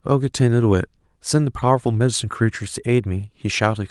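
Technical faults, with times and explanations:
No technical faults are audible.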